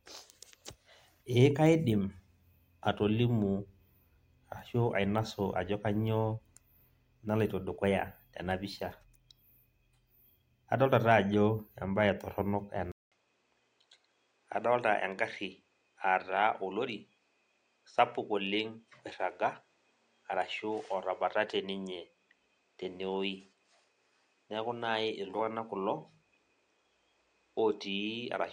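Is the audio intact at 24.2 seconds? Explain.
No. From 12.92 s to the end, the sound is band-limited with nothing above 9.3 kHz, a few decibels quieter, and carries a new low noise floor after a 0.2 s gap, likely an input switched to a poorer device with a narrower band.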